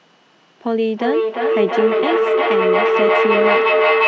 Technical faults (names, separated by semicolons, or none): feedback howl